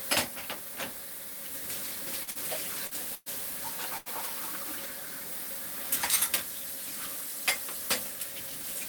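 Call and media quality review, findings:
Short concealed packet loss at 2.23–2.30 s, 2.31–2.38 s and 2.87–2.94 s: brief smears and wobbles in the sound. Jitter buffer/decoder PLC. About 40 ms arrived too late each time, bridged by roughly 35–42 ms of extrapolated signal, then crossfaded back.

Burst of packet loss at 3.15–3.29 s and 3.98–4.09 s: held, fading tail, then a jump ahead. Network path, receiver concealment. 120 ms missing in the first, with 110 ms of decaying extrapolation and 20 ms of silence; 80 ms missing in the second.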